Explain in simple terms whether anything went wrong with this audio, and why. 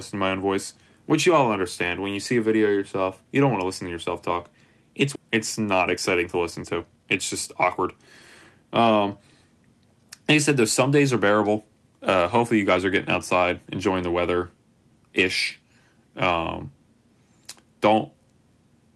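Two things went wrong, one right after the other. Both come from how this speech travelled over a call connection.

At 5.15 s there is a skip ahead. About seven tenths of a second of speech never plays. A chunk of audio was dropped, either on the way or because the receiver had no room to hold it all, so playback jumped forward. Nothing fills the hole. The sound on either side is simply joined together, so the speech lurches abruptly.

From 5.25 s to 8.50 s comes a jitter buffer speed-up. The receiver still had more audio stored than it wanted. To catch up, it kept cutting out tiny slices of the sound, over and over. In total about a third of a second disappears. The speech runs about 9% fast, yet the pitch stays the same. It sounds rushed, then settles back to normal pace.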